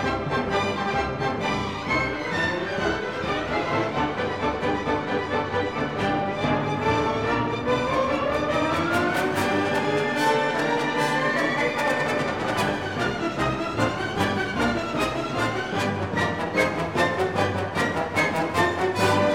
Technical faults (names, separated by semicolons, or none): none